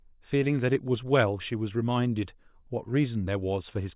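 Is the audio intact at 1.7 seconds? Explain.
Yes, the audio is intact at 1.7 seconds, with no dropout, click, distortion or other fault audible at that moment.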